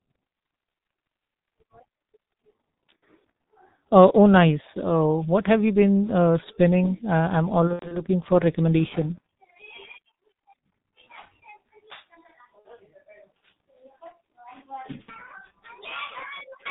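Heavily muffled, hoarse speech runs through the whole recording, with nothing audible above 4 kHz and consonants smeared together. This is the sound of the G.723.1 codec, an early internet-telephony coder whose band limit and slow-moving voice model strip detail and blur fast transitions. The damage is severe and fits its 6.3 kbit/s mode. Over that, VoIP packet loss concealed by the speech codec breaks in four times: at 2.99 s, from 7.67 to 8.03 s, from 12.59 to 12.68 s, and from 15.02 to 15.10 s. Each time the voice is stretched into a fading sound. The decoder repeats its last pitch and filter settings while it turns the level down. The longest gap, around 8 s, sounds like scattered dropouts spread over about a quarter-second, and the voice stays weak or rough for a moment after each gap.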